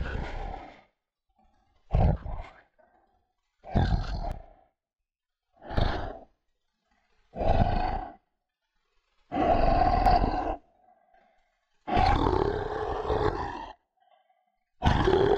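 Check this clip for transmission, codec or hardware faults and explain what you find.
There are two sudden gain jumps in this recording of sounds. From 4.32 to 5.77 s the level drops by about 10 dB, and from 10.06 to 10.18 s it rises by about 7 dB. Each change likely comes from a gain step applied between one sample and the next with no ramp. The sound and the background noise shift together, unlike an automatic gain control, which glides.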